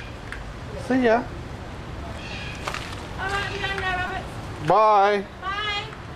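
At 4.08 to 4.10 s there is a repeated buffer: fresh audio failed to reach the output in time, so the device replayed its last short buffer four extra times instead of stalling. The repeats suggest a buffer of about 5 ms, looping roughly 200 times per second with a hard join at each restart. This is heard as a click or brief buzz, and the sound then continues without any gap.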